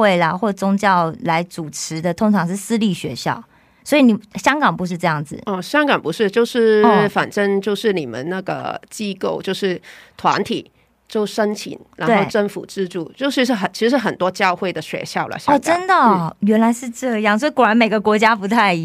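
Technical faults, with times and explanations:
1.97–2.01 s, 8.59 s and 10.31–10.37 s: corrupt frame decoded. Each is a brief noisy blip where damaged bits in the compressed stream were decoded as if valid. Misread gains and codes put energy at the wrong frequencies for about the length of the damaged frames, which sounds like roughly two frames at the first and last events and one at 8.59 s. The blips peak at about -25, -20 and then a much louder -5 dBFS.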